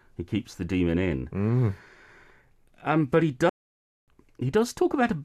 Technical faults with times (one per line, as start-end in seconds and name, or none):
3.49-4.08 playback stall